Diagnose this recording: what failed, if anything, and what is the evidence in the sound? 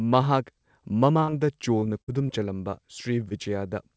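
Packets on the network leg of the call arrived too late or not at all, and the receiver covered each hole with short concealed packet loss at 1.20 to 1.30 s (two back-to-back gaps of 20 and 40 ms), 1.80 to 1.84 s, 2.27 to 2.31 s and 3.29 to 3.33 s. The decoder extends the preceding sound and blends back, so each spot is a brief smear or wobble.

A burst of packet loss on the same network path removed about 60 ms of speech at 2.02 to 2.09 s. The receiver stretched the last sound over most of the gap while fading it, giving a held buzz or dying hiss. Speech then resumes slightly further on, and the audio in between is gone. The call codec's band stops at 8 kHz, which fits G.722 at 64 kbps.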